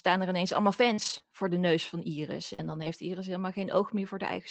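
From 0.93 to 2.88 s, just after "er ineens allemaal", the speech has scattered short gaps: about four small holes where packets went missing or arrived too late. The receiver covered each by stretching the preceding sound, which leaves brief ticks and smeared syllables. About 120 ms was lost in all, with about 260 ms rebuilt, and no single gap exceeds roughly 40 ms. That separates this from one long dropout, which would leave a single audible hole. Across the clip the band stops near 8 kHz, which fits an Opus call path at about 24 kbps.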